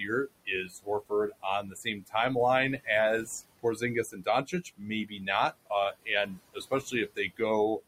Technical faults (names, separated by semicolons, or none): noise suppressor artifacts; speech cut by the noise suppressor